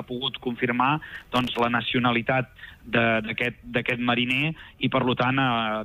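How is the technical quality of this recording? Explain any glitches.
From 1.15 to 1.59 s a burst of gritty crackle tears across the audio, then stops. This is processor overload crackle: the processor missed around twenty deadlines for very short buffers, roughly a millisecond and a half each, and each miss repeated a hard-edged scrap of old audio.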